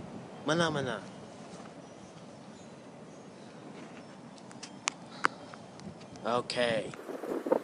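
From 6.97 s to the end at 7.63 s, the sound jumps to twice its speed and a full octave higher, an upward shift of 12 semitones, giving a thin, chipmunk-like rush. This is a wrong sample rate fault. The samples are being read out at double the rate they were captured at, with no conversion between the two, which fits material recorded at about 22 kHz being played at 44.1 kHz. Tempo and pitch therefore rise together by the same factor of two.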